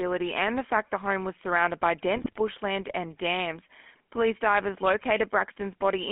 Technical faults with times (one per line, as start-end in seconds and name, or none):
0.00-6.11 GSM full-rate codec
2.15-2.38 GSM bit errors